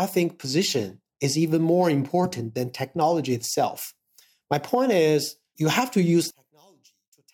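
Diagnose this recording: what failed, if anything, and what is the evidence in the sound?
One channel inverted, from 6.30 s to the end at 7.33 s. When the channels are summed to mono, the speech drops by about 34 dB, leaving a faint trace where the centred voice and its low end should be. Because both channels carry nearly the same signal, flipping one channel's polarity makes them cancel almost completely. The stage is likely the analogue wiring, such as reversed conductors on one leg of a balanced line.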